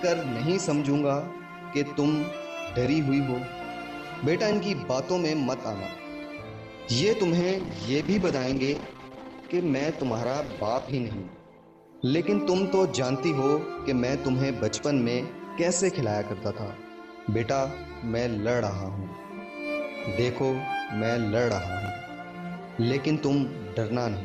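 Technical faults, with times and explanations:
7.41–14.01 s, call bitrate drop: encoding falls from 40 to 15 kbps, lowest for 3.5 s, so coarser coding and lost highs sound rough and muffled.
21.82–21.88 s, chunks out of order: a 20 ms chunk plays two chunks late, jumbling the sound briefly, with three hard joins.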